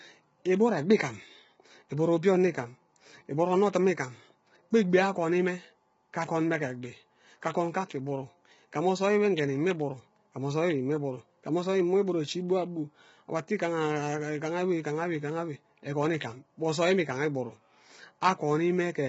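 Throughout the clip, the speech was likely squeezed through low-delay AAC compression at a very low bitrate, around 16 kbps. Its short frames blur the pitch harmonics, so voices sound rough and grainy, with noise filling the gaps between harmonics and nothing above 7.7 kHz.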